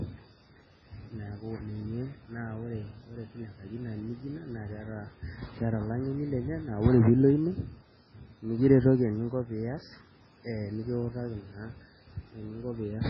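Throughout the speech, the sound is watery and swirling, with smeared consonant attacks, metallic chirps on s sounds, and nothing above 6.7 kHz. This is likely heavy MP3 compression, fitting a very low bitrate near 16 kbps, which cuts the treble and switches weak frequency lines on and off between frames.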